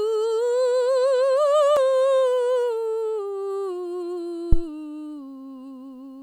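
At 4.53 s the music is interrupted by a phantom power thump lasting until about 4.64 s. A supply was switched on or off on a live input, and the sudden DC step travelled through the coupling capacitors into the signal path. It sounds like a deep, dull thud peaking at about -3 dBFS. It dies away in roughly 26 ms, so it registers as a short low-frequency knock.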